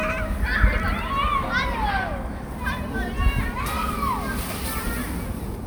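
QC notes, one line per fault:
No faults heard anywhere in the clip.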